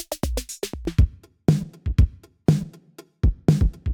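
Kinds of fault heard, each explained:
De-emphasis applied wrongly: A treble-cut filter meant to reverse pre-emphasis has been applied where no matching boost existed, so it removes high frequencies that belonged in the signal. The cut slopes down smoothly as frequency rises, reaching about 11 dB at 10 kHz relative to 1 kHz. From 0.85 s to the end, the sound turns dull and muffled, with its upper detail and air noticeably dimmed.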